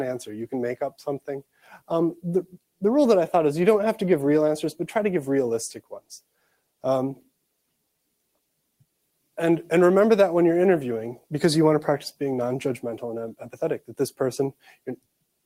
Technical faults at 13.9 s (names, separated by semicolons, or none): noise suppressor applied to music or sounds; sound cut by the noise suppressor